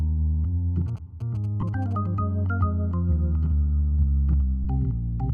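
GSM signalling bursts run from 0.88 to 1.93 s. A nearby 2G phone was exchanging short signalling transmissions with its network, and the audio circuitry rectified that radio energy into the signal path. The result is the familiar galloping dit-dit-dit: clusters of brief buzzes repeating at about 217 Hz, sitting roughly 25 dB below the wanted sound.

Lost LE Audio frames occur at 1.61 to 1.63 s, overlapping the tail of the buzzing, and again at 4.64 s. The first gap lasts 15 ms, which fits two 7.5 ms frames; the second lasts 7.5 ms, about one frame. The LC3 decoder covered each hole by reusing the last spectrum with randomised signs. Because the gaps are so brief, there is no fade to silence.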